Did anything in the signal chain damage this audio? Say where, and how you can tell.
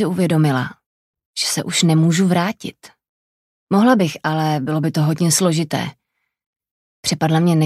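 No, nothing stood out on listening that would point to damage at any stage of the signal chain.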